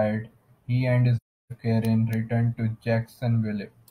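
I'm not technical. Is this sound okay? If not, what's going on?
No. The speech drops out for about a third of a second, from 1.17 s to 1.52 s. This is AAC frame loss with muting. The audio travels in small compressed chunks called frames. Several chunks in a row never arrived. The decoder filled the gap with silence instead of guessing. Because neighbouring chunks overlap, the sound fades out gently and fades back in. So you hear a soft-edged hole in the speech.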